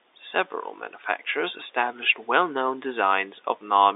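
Nothing here counts as a fault: the speech sits in an ordinary G.711 telephone channel, with the band running from about 300 Hz to 3.7 kHz and nothing above roughly 3.8 kHz, just as a fixed phone line should sound.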